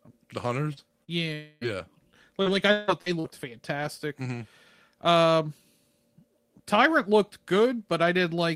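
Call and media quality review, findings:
Short concealed packet loss, 0.73–0.90 s and 1.04–1.11 s: brief smear or wobble where about 40 ms never reached the decoder. Jitter-buffer concealment extends the previous sound for 32 and 38 ms, then crossfades back, adding about 10 ms at the first. Unlike FEC, the audio is extrapolated rather than rebuilt.

Lost packet rebuilt from error correction, 0.77–0.79 s, 1.08–1.10 s and 1.61–1.63 s: 20 ms frames with no gap, just rougher, noisier texture. The Opus decoder plays the low-bitrate in-band FEC copy from the following packet. Unlike concealment, this is real but degraded content.

Long network dropout, 1.34–1.78 s: a continued buzz filling 276 ms, with about 280 ms of material missing, no silent stretch, and about 11 ms added. This is likely a network outage patched by extended concealment. It stands apart from the short losses by its length and the part lost within it.

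Repeated packet loss (robotic sound), 2.42–3.26 s: choppy speech with pieces missing. Four separate gaps total 278 ms, with the longest at 158 ms, so about a third of the span is concealed and roughly 70 ms is recovered from FEC. Unlike a single dropout, the holes recur in quick succession.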